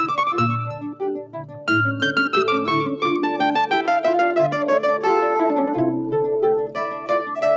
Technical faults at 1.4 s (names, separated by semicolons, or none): noise suppressor applied to music or sounds; sound cut by the noise suppressor